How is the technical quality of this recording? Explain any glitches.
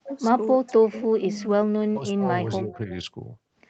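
The recording has clear call-path faults: repeated dips in the speech and two brief echoes. The sound is band-limited to 8 kHz, as a call codec does.

Speech suppressed in double talk occurs at 0.0–0.09 s, 0.6–1.53 s, 1.82–2.27 s and 2.44–2.91 s. The speech drops sharply, by up to about 40 dB. The likely cause is an echo canceller that mistook this talker for loudspeaker echo while both sides spoke, and turned everything down.

An echo leak is heard at 0.67–0.73 s and 2.73–2.78 s. A faint, delayed copy of the speech appears, about 309 ms late and about 25 dB below the speech. It is a short scrap. Likely, the loudspeaker side's echo canceller let some loudspeaker pickup through.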